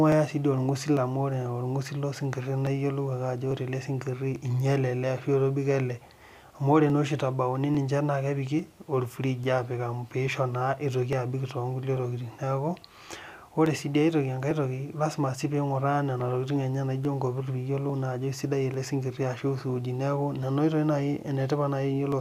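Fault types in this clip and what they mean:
Clock drift buffer slips: A regular click or pop recurs every 0.85 s, about thirty times from 0.12 s to 22.1 s, wherever the speech carries signal. The likely cause is two devices on independent clocks, with a mismatch of several hundred ppm, so the buffer between them creeps until a small block of samples, on the order of thirty, is dropped or repeated. A waveform shows a discontinuity at each slip, and a spectrogram shows evenly spaced thin vertical broadband lines.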